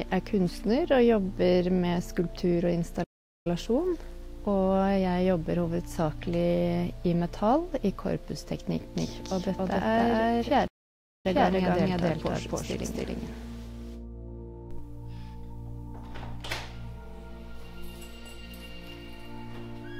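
A playback stall at 3.03 to 3.47 s cuts the sound off mid-flow for about 0.42 s, likely because the player ran short of data or its thread was held up. It then resumes.

A doubled audio track runs from 8.96 to 14.79 s. A second full-band copy at roughly the same level trails by about 0.3 s. It has no decay or room colour, and it appears and vanishes abruptly at both ends. The likely cause is the audio being captured again through a slower path.

Inside that stretch, a second playback stall at 10.67 to 11.26 s silences the output for about 0.57 s before the sound picks up again.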